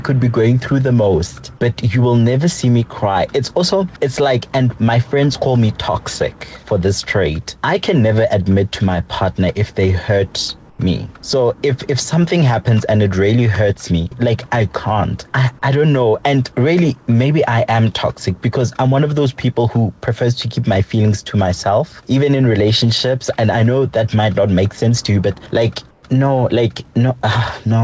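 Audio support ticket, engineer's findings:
Comfort noise in place of the background at 10.70–10.79 s and 25.91–26.03 s: room tone goes flat and featureless, about 8 dB down, likely DTX on the sender with synthetic fill at the receiver, over a band that stops at 8 kHz, consistent with G.722.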